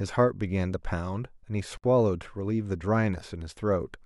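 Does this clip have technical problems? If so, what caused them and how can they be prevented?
Yes. A gap at a join of encoded pieces runs from 1.77 to 1.84 s, a gap of about 62 ms cutting into continuous speech. The edges are smeared by the codec, and the speech resumes exactly where it stopped. Separately encoded pieces were joined without trimming, so one piece's padded final frame and the next piece's encoder-delay silence both remained at the seam. To prevent it, trim the encoder delay and padding at each join, or encode the audio as one continuous stream.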